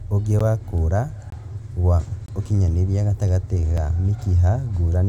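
Four blocks of digital silence drop into this speech. A 12 ms one at 0.39 s, then two matching 21 ms holes at 1.30 to 1.32 s and 2.26 to 2.28 s, which fits a 1024-sample buffer the program didn't fill in time. A tiny 6 ms one lands at 3.77 s. Each cuts out hard and back with no fade, so the short ones come across as ticks and the longer two as brief popping dropouts.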